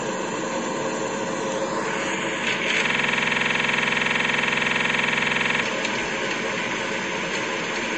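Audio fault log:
throughout: MP3 compression. Nothing in these everyday sounds reaches above 10.5 kHz, and the band below carries a watery, swirling texture with metallic chirps on bright transients and softened attacks. This is likely lossy coding at a low bitrate, perhaps around 37 kbps, that cut the treble and dropped weak frequency lines that flicker frame to frame. On a spectrogram, energy ends at a flat ceiling near 10.5 kHz, and the upper region below it shows scattered, blocky holes that come and go.
2.87–5.63 s: system hang loop. For almost three seconds the same 46.44 ms slice of audio repeats exactly, roughly 60 times. It is heard as a rough, machine-like buzz at 21.5 Hz instead of the normal sound. The system stalled while the playback hardware kept cycling one buffer, and the length fits a 2048-sample buffer. The waveform shows an identical short pattern tiled edge to edge. 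The spectrogram shows vertical stripes every 46 ms and a frozen spectral picture across the span.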